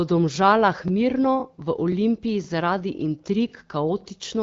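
Little stutters land at 0.88–0.90, 1.92–1.94, 2.44–2.47, 3.49–3.51 and 4.01–4.03 s. These are overlapping chunks: the speech was handled in half-second blocks that each start slightly early, so about 21 ms gets played twice at the join. The gaps fall at multiples of that half second, though not every join is affected. Underneath, the AMR wideband (HD Voice) coding sounds clean, which fits its 12.65 kbit/s mode.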